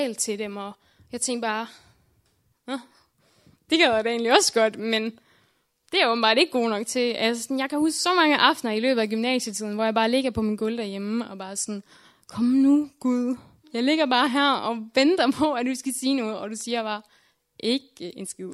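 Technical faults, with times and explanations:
Nothing technical goes wrong anywhere in this recording, so there's nothing to flag.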